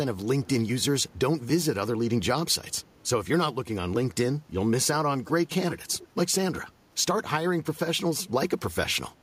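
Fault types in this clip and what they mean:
Echo leak: A delayed copy of the speech returns about 370 to 390 ms after the original. It appears in short scraps at 0.42 to 0.5 s, 5.25 to 5.31 s, 5.69 to 6.05 s and 9.17 to 9.22 s. The longest scrap, near 5.7 s, is loudest, about 10 dB below the speech. The others are far fainter. The likely cause is a loudspeaker whose echo canceller let its own playback back into the call.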